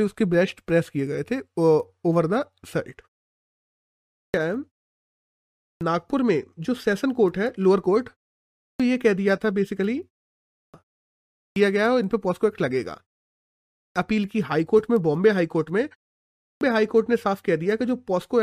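Clipped start after a pause at 3.95, 5.41, 8.4, 10.32, 11.12, 13.58 and 16.23 s in this speech: after each silence of 0.3 to 0.95 s, the output device sleeps, and waking swallows about 0.38 to 0.44 s, so speech begins abruptly.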